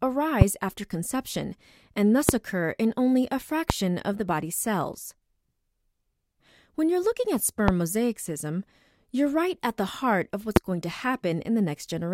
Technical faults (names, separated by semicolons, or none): loud pop